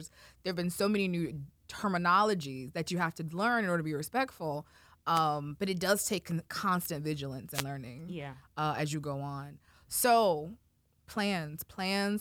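A short swish of static cuts across the speech at 5.14 to 5.21 s, between "order to be respectful" and "but it does take", and again at 7.53 to 7.64 s after "constant vigilance": wireless microphone noise hits, where the FM radio link faded and receiver noise briefly rose.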